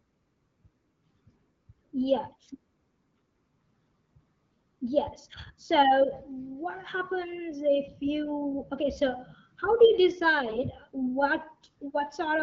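At 10.48 to 10.68 s the speech turns briefly hoarse and gargly: AMR bit errors, where a few percent of the weakly protected bits in the wideband stream arrived flipped, misplacing excitation pulses. Unlike frame loss, pitch and level hold; only the texture scrapes.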